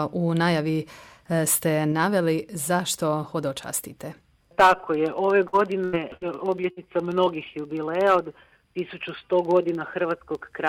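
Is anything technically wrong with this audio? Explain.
Yes. Between about 5.5 and 7.3 seconds the audio breaks up in a cluster of network losses.

There are four bursts of packet loss, at 5.47–5.55, 5.85–5.95, 6.17–6.23 and 6.71–6.79 s. Each time, several consecutive packets failed to arrive. The receiver stretched the last good sound for 45 to 80 ms while fading it, then resumed with 40 to 80 ms of material gone. Each sounds like a brief held buzz or dying hiss followed by a jump. On a spectrogram this shows as a smeared, frozen band with no detail that decays, then an abrupt vertical seam where the real signal returns.

At 7.25–7.28 s a short concealed packet loss follows. About 20 ms never reached the decoder in time, and the receiver synthesised roughly 14 ms to cover it by continuing the preceding sound, then cross-faded back. It is heard as a quick smear or wobble. On the waveform it appears as a short stretch continuing the preceding sound that blends into the surrounding signal.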